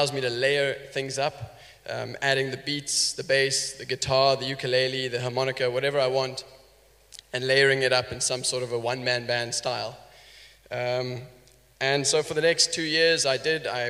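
No technical fault can be heard anywhere in the audio; the signal stays continuous and stable throughout.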